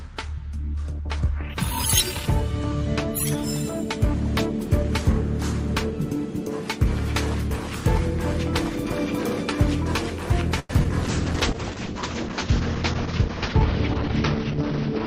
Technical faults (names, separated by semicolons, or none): call audio freeze; short concealed packet loss; call bitrate drop